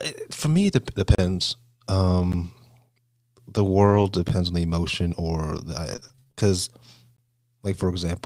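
Right at 1.15 to 1.18 s there's a block of digital silence, a 35 ms drop straight to zero, so it lands as a short hole. Another hits at 2.32 s, only about 12 ms, more of a tick. That length fits a 512-sample buffer, which suggests the output buffer wasn't filled in time.

From 3.86 to 4.04 s there's a lost packet rebuilt from error correction, or really a run of them covering about 100 ms. There's no gap, but the decoder is playing low-bitrate backup copies, so that stretch sounds rougher and noisier.

More zeroed blocks follow at 4.28 s (again about 12 ms, same buffer-sized tick) and 5.58 s (about 8 ms).

Then 5.92 to 6.41 s is repeated packet loss with a robotic sound: ten holes in half a second, the longest 25 ms. Some are patched by stretching the last sound, about 190 ms of it. The remaining 200 ms is simply missing, so it comes out choppy.

A last silence block lands at 7.17 s, roughly 18 ms, a short pop.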